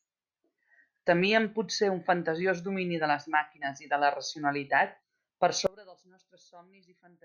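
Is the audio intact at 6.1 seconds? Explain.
No, not at 6.1 seconds. From about 5.67 s, right after "de la racionalitat per", through to the end at 7.25 s, the speech collapses by about 29 dB into a faint trace. That's the signature of one channel inverted: with one side's polarity likely flipped, the centred speech cancels when the channels are summed to mono, and only the small difference between them survives.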